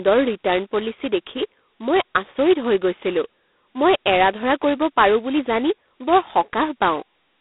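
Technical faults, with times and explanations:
Throughout, G.726 ADPCM: heavy codec damage gives the speech a harsh, rasping hiss that rises and falls with its level, which fits the 16 kbit/s rate. Unlike a plain telephone band-limit (250 Hz to 3.6 kHz, nothing above 3.9 kHz), the noise is level-tracking and grainy.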